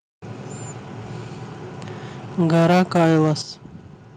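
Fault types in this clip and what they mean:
Microphone overload: from 2.4 to 3.29 s the peaks flatten and crackle, roughly a sixth of samples clipped, likely input gain set too hot.
Microphone volume stepped down: the level drops abruptly at 2.41 s by about 2 dB and at 3.43 s by about 8 dB, likely automatic gain control reacting.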